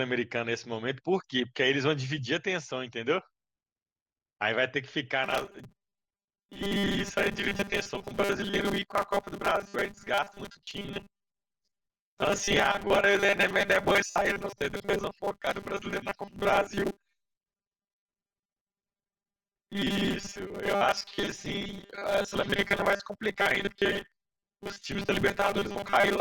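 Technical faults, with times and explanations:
5.24 s to end: robotic sound from repeated short buffers, a rigid metallic 200 Hz buzz, likely from 5 ms chunks looping in place of roughly half the audio.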